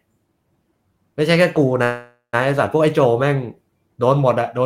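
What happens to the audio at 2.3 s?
At 2.3 s the sound is near the end of a call audio freeze running from 1.83 to 2.35 s, most likely because packets stalled in transit and the jitter buffer emptied. The receiver stretched the last sound into a fading buzz or hiss for about half a second, with roughly 130 ms of silence in it. Once packets resumed, the audio picked up where it halted, so nothing is lost but everything after arrives about 0.5 s late.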